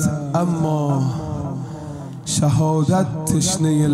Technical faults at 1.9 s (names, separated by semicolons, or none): none